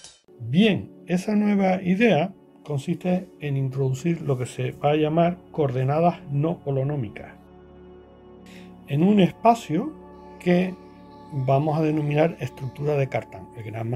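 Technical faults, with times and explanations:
Nothing technical gets in the way here; the audio runs its whole course without anything going wrong that a listener would pick up on.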